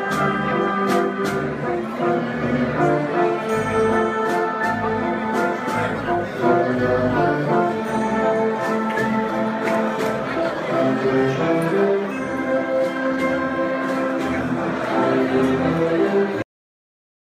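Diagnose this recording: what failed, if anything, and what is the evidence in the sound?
The clip has a cut-off end: at 16.42 s the sound stops mid-event and drops straight into digital silence with no decay. That points to the storage or buffer stage, where the final buffers were never written out before the file was closed.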